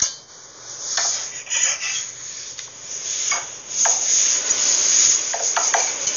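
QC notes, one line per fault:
Throughout, Dolby Digital compression. Nothing is heard above about 6.9 kHz, so the sound is dull and closed-in. The damage is heavy. Tonal parts carry a rough, fluttering noise around them. The likely cause is a Dolby Digital encode at a very low bitrate, which fits roughly 48 kbps. With so few bits, the encoder cuts the upper band and leaves many frequency lines without detail. The decoder fills those gaps with noise, and that noise is the flutter.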